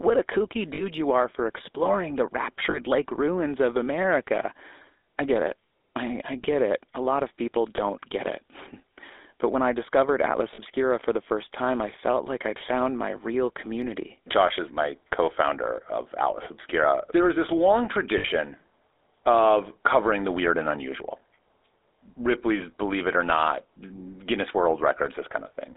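The whole recording carries the GSM full-rate codec's buzzy, gravelly roughness. Pulse-driven vocal-tract modelling at 13 kbps leaves a coarse excitation, and the phone line limits the band to 300 Hz to 3.7 kHz. A spectrogram shows a hard ceiling near 3.7 kHz and little below 300 Hz.

Lost GSM frames cause brief rough, metallic rings at 0.74 s (between "a kooky" and "you are for exploring"), 2.70 s, 7.76 s, 10.54 s (before "for the first time") and 18.18 s (after "is this long"). During each, the decoder repeats the last good frame. The lengths fit one to three 20 ms frames. A spectrogram shows smeared, static harmonic bands, and the waveform shows a short plateau.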